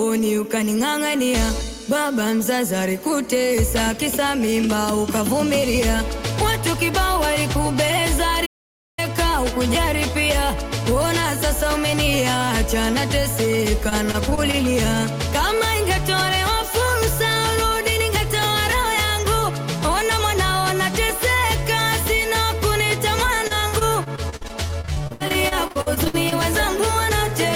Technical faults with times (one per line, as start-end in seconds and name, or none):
8.45-8.99 playback stall
13.89-14.55 repeated packet loss (robotic sound)
23.47-26.33 repeated packet loss (robotic sound)